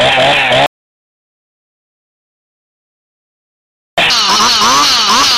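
At 0.66 s the sound stops dead and stays silent until 3.98 s, an audio dropout to silence lasting about 3.3 s. The likely cause is a lost input, such as a disconnected device, a failed link or a stray mute, with the recorder still writing silence. Unlike a fade or a quiet passage, there is no room tone or noise floor in the gap, and whatever happened during those seconds is simply missing, with abrupt edges at both ends.

From 4.10 s to the end, the audio runs as a section at the wrong speed: about 1.65 times too fast, which raises the pitch by roughly ten semitones. It was likely played or edited against the wrong clock. The sound turns high and hurried all at once. What separates this from a pitch-shift effect is that tempo and pitch move together: timing compresses along with the jump in pitch, rather than the pitch rising while timing stays natural.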